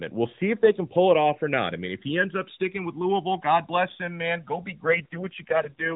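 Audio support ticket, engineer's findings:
Channels drifting apart, whole clip. The two channels come from devices on unsynchronised clocks, off by a few hundred ppm, so the inter-channel delay slides to around 2 ms by the end. Summed to mono, comb notches sweep slowly through the spectrum, heard as slow flanging.

AMR rate drop, 4.86 s to end. Mobile link likely degraded, network forcing AMR-NB down from its 12.2 kbps mode to what sounds like the 4.75 kbps mode. Same narrow band and no gap, but the sound turns buzzier, rougher and more synthetic through the close.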